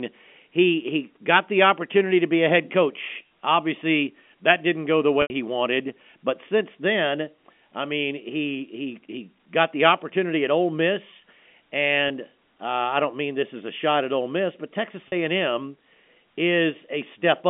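Packet loss with pitch repetition occurs three times in this speech: audio went missing at 5.22 to 5.30 s (80 ms, consistent with four 20 ms packets), 12.08 to 12.10 s (20 ms) and 15.08 to 15.12 s (40 ms). The receiver bridged each gap by repeating the last pitch period, so the voice briefly holds a slightly buzzy, static tone. Over the 80 ms gap this fades toward silence before speech cross-fades back, all within the narrow telephone band of G.711.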